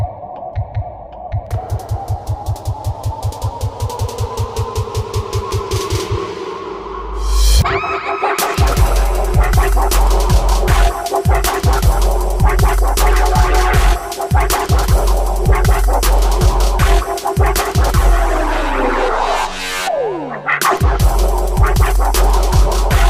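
From the start to about 7.6 s, the resampler restarted on every block. The conversion from 44.1 kHz to 48 kHz treated each 20 ms block in isolation, so each block edge had no true neighbouring samples and carries a small error. Those errors repeat at 50 Hz and form a buzz that follows the signal. On a waveform there are small discontinuities every 20 ms. A spectrogram shows harmonic lines spaced 50 Hz apart while sound is present.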